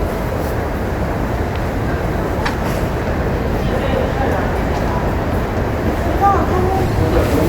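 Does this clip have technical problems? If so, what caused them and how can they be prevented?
Yes, three short bursts of corrupt frame decoding: at 2.43 to 2.50 s (close to full scale), 3.64 to 3.68 s, and 6.86 to 6.92 s. Flipped bits in a few compressed frames were decoded anyway, so misread gains and codes spray energy into the wrong frequencies, giving brief noisy chirps. To prevent it, add checksums or error protection so the decoder conceals damaged frames rather than playing them.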